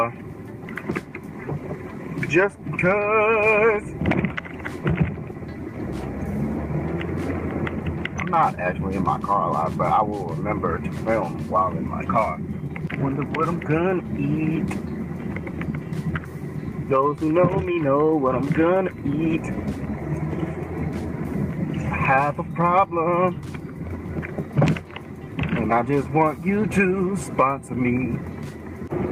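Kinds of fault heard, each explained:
Nothing stood out on listening to the clip.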